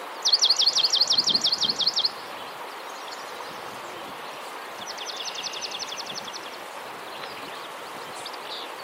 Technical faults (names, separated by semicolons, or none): none